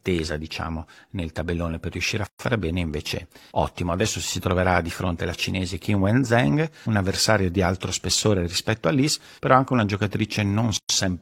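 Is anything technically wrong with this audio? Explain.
Yes. There are gaps at joins of encoded pieces, at 2.27–2.39 s (126 ms) and 10.77–10.89 s (121 ms). Separately encoded chunks kept their padding silence. The speech drops out abruptly, then resumes.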